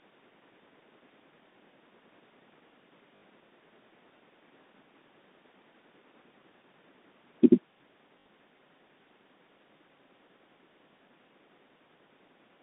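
A speech clip, carried over G.711 telephone coding with its narrow 200 Hz to 3.7 kHz line band, with two brief robotic stutters from 3.16 to 3.22 s and from 8.20 to 8.26 s, each buzzing for 60 ms. This is packet loss with the last packet repeated: the receiver replayed the same short chunk until audio resumed, and the repeats fit 20 ms packets.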